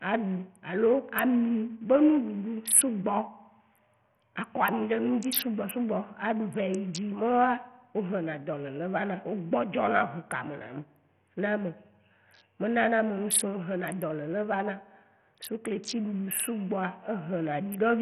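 A speech clip with Bluetooth SBC compression damage throughout: flickering, thinned treble with nothing above 14.7 kHz, and gritty aliasing, likely from a starved bit pool around 48 kbps.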